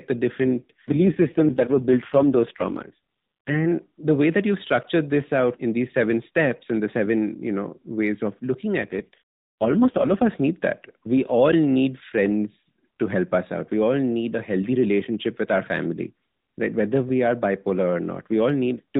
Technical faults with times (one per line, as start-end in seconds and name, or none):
0.44-3.66 AMR rate drop
8.82-10.29 AMR rate drop